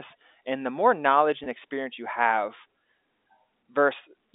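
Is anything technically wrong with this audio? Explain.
Yes. Packet loss with pitch repetition occurs at 1.44–1.46 s, between "the more knowledge" and "experience you have". About 20 ms of audio, likely one packet, went missing, and the receiver filled it by repeating the last pitch period. The result is a brief buzzy hold rather than a silent gap or click. The telephone-band G.711 coding, cut at 3.7 kHz, sounds normal.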